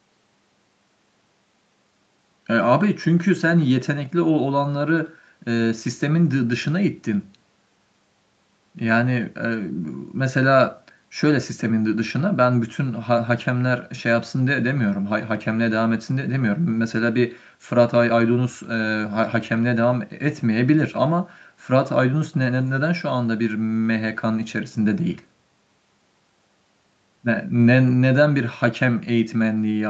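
No technical faults can be heard in this speech recording.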